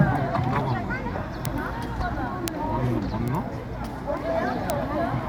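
Four isolated sharp ticks at 1.45, 2.48, 3.28 and 4.70 s are bit error spikes. Each is a single flipped bit in a stored or transmitted sample that throws the value off by a power of two before it snaps back, so the click bears no relation to the surrounding sound. On a waveform each shows as a lone needle-thin vertical spike, the one at 2.48 s slightly wider, fitting two corrupted samples in a row. On a spectrogram each is a full-height vertical hairline.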